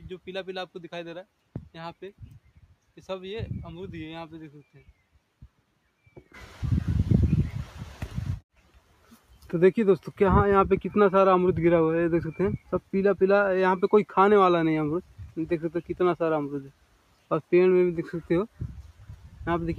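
A noise suppressor built for speech runs across the whole clip and treats parts of the sound itself as noise. Its gain reduction moves over a range of around 5 dB as the material changes: it lets onsets pass and pulls down sustained content and decaying tails, so the level rises and falls with what the suppressor judges to be noise rather than with the sound itself.

Eight passages are cut further by the noise suppressor, where it has taken the sound for noise: 2.44 to 2.90 s, 4.74 to 4.92 s, 8.42 to 9.50 s, 12.59 to 12.89 s, 15.02 to 15.37 s, 15.67 to 15.96 s, 16.62 to 17.52 s and 18.89 to 19.40 s. In each, the gain drops by about 10 to 12 dB at its deepest. Held or fading parts sink and tails end early, while sharp attacks survive. The longest cuts are the ones near 8.4 s and 16.6 s, each lasting most of a second.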